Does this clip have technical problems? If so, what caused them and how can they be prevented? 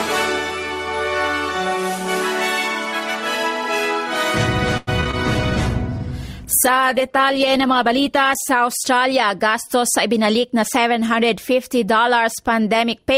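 Yes. From 4.77 to 5.15 s there is repeated packet loss: a run of short holes, the longest about 97 ms, each patched by stretching the preceding sound, so the stretch turns choppy and robotic. On a waveform this shows as repeated, suspiciously regular cycles, and on a spectrogram as smeared, ladder-like harmonics with brief dropouts. A steadier network path and a larger jitter buffer or stronger loss protection would help prevent it.

A call bitrate drop follows from 5.16 to 8.59 s. The sound turns coarse and muffled, which points to the encoder falling from around 64 to 14 kbps and discarding detail and treble. A spectrogram shows the upper band cut off flat and the rest blotchy. Keeping enough spare bandwidth for the call would prevent it.

From 10.08 to 10.99 s a jitter buffer speed-up makes the audio run at about 107% of normal speed with unchanged pitch, as roughly 70 ms of short pitch-period slices are removed. 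The waveform looks slightly compressed in time, with tiny splice joins. More even packet delivery would avoid it.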